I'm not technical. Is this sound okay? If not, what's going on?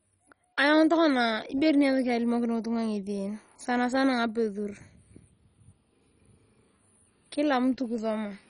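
No. Throughout the whole clip the speech sounds dull and heavily gurgly, with a grainy, bubbling roughness on the voice. This is MP2 compression, likely from saving it in an old digital-radio-style format with far too little room for detail. Everything above about 10.4 kHz is gone, and what remains is roughly approximated. Plain muffling would just sound dull. Here the crisp parts also flicker in and out, giving that churning, underwater grain.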